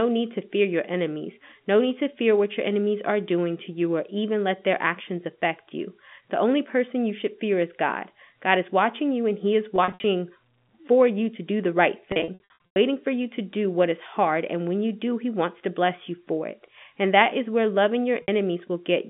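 Packet loss with pitch repetition hits three times. From 9.76 to 10.04 s, about 160 ms of gaps in runs up to 60 ms. From 12.12 to 12.76 s, between "to do the right" and "for you to do", 400 ms lost, runs up to 100 ms. At 18.22 s, after "that is where loving", a 60 ms hole. Each gap gets patched by looping the last pitch cycle, so you hear brief buzzy, held-tone smears where the speech should keep moving, and in the longer runs the repeat fades into silence before the speech cross-fades back, all over the narrowband G.711 phone line.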